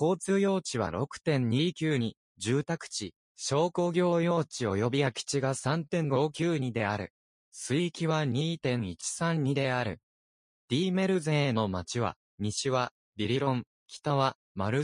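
No dropouts, clipping, distortion, timing breaks or level jumps can be heard anywhere in the clip, so there is nothing to report.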